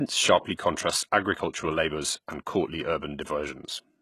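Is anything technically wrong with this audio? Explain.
Yes. Throughout the speech, the treble sounds synthetic, with gritty, lispy s sounds and nothing above 12.3 kHz. That is likely HE-AAC compression, rebuilding treble from copied lower bands, consistent with a bitrate near 16 kbps.

From 0.55 to 0.59 s, a short hiss leads a sharp attack, softening it. This pre-echo comes from block-spread quantisation noise spilling about 34 ms ahead of the attack.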